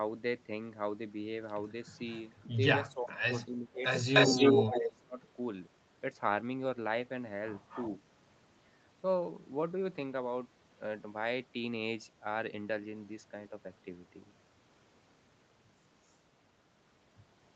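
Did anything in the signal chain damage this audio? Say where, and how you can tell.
Yes. The call processing stage shows an echo leak. Delayed copies of the speech appear at 2.4, 3.36, 4.13 to 4.96, 7.69 and 16.11 s. They trail by 366 ms at first, then 267 ms. Most are faint. The 4.13 s stretch is about as loud as the speech. The likely cause is a far-end echo canceller passing its loudspeaker pickup back.

Speech suppressed in double talk also occurs. The speech dips deeply from 2.94 to 3.84 s and from 4.68 to 5.18 s. It dips only slightly at 4.29 s. These dips overlap the echo. The canceller likely took the overlap for echo and turned both down.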